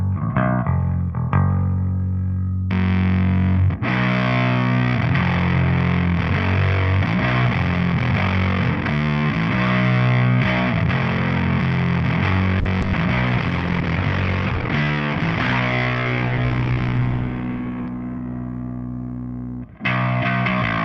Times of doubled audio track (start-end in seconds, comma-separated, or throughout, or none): none